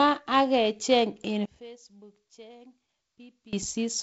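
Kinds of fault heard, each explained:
One channel inverted: the speech sinks by about 23 dB from 1.45 to 3.53 s, likely one side's polarity flipped and cancelling in mono.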